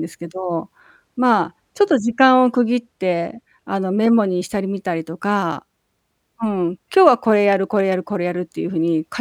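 From 0.80 s to 3.66 s, one channel runs late by roughly two hundredths of a millisecond, which fits a delay of about a single sample, and the two channels are folded to mono. This channel delay causes comb filtering, but with so tiny an offset only the first cancellation notch falls in range, up near 20 kHz. The speech loses its top-end air and sounds dull and veiled rather than strongly hollow.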